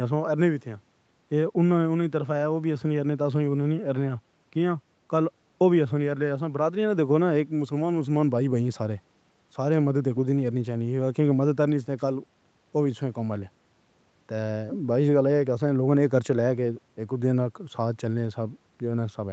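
Speech carried over a call, with no technical fault to be heard. Nothing reaches above 8 kHz, which is the normal band limit of the call's microphone processing and codec and points to a wideband Opus call path.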